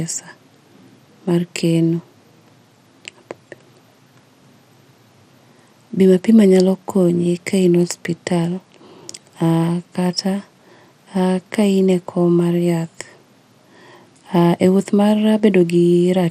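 Throughout the speech, the encoder likely ran MP2 compression at a low rate, which fits roughly 80 kbps, leaving too few bits for its sub-bands. Nothing survives above 15.1 kHz, and coarse quantising of the remaining bands gives a plainly audible dull, gurgling, granular roughness.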